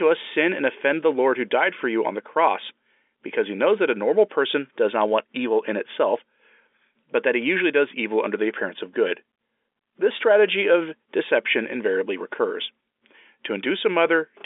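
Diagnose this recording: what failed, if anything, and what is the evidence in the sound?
Nothing has failed here: it's ordinary telephone speech carried over G.711 mu-law at 64 kbps, with the usual line band of 300 Hz to 3.5 kHz, and no stage along the chain is doing anything wrong.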